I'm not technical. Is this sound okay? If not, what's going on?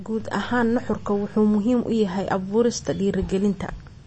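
No. The speech was likely squeezed hard by MP3 compression, which drops everything above about 8.3 kHz, so it sounds dull and watery throughout.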